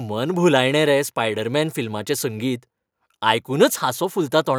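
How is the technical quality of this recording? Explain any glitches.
No glitches can be heard anywhere in this speech recording. There is nothing in it that needs a technical explanation.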